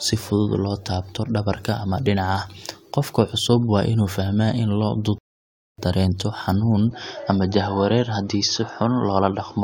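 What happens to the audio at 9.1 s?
At 9.1 s you're inside a stretch running from 6.91 s to the end where the speech abruptly goes duller, with nothing above 6.6 kHz and a faint new noise underneath. It's likely the input switched to a poorer device, with no gap and no real level jump.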